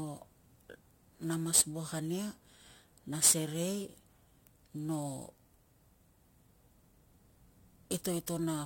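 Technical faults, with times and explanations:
Throughout: crude rate conversion. Samples were simply taken at the nearest position, with no filtering, which fits a step from 48 kHz to 44.1 kHz. The repeating timing error leaves a gritty, inharmonic fizz only modestly below the speech, following loud and bright sounds.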